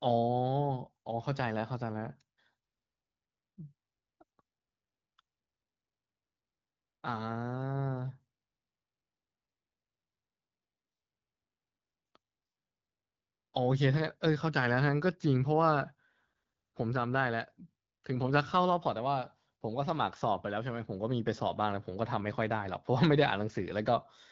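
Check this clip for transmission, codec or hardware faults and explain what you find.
Nothing amiss turns up in the speech, which carries the band-limited sound of AMR wideband (HD Voice) coding at 12.65 kbit/s, with nothing above 7.5 kHz and only a light coding texture.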